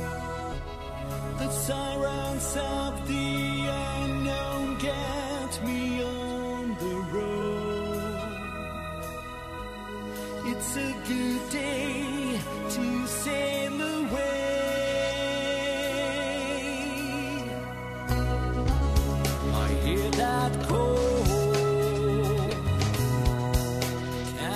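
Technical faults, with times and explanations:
11.50 s, compressed frames skipped: whole frames are missing or refused by the decoder, so about 70 ms of audio is lost and the sound jumps ahead at the join.
22.46–22.53 s, corrupt frame decoded: flipped bits in a few frames are decoded anyway, misplacing energy across frequencies, with the error peaking around -20 dBFS.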